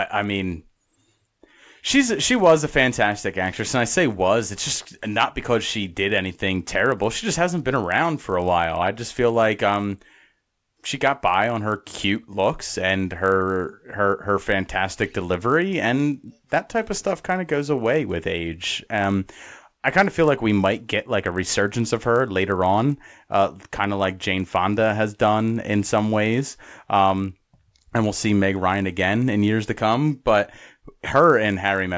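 Resampler restarted on every block, throughout the clip: the rate converter, in what sounds like a 24 kHz to 16 kHz conversion, was run on each 20 ms block in isolation, losing the neighbouring samples it needed at each block boundary. The result is a small error at every edge, repeating at 50 Hz, heard as a low, rough buzz riding under the speech that disappears whenever the speech stops.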